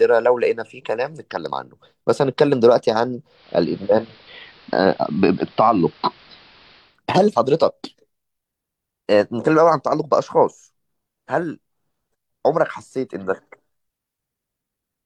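From 3.26 s to 7.00 s, digital radio blending to analogue: the receiver lost the digital stream and cross-faded over 244 ms to the station's AM broadcast, then back. Speech loses treble and gains faint hiss, at unchanged level.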